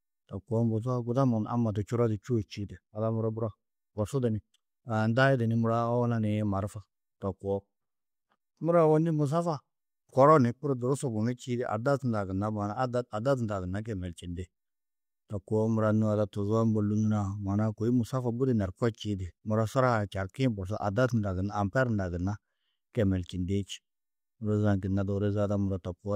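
No technical faults are audible anywhere in the recording.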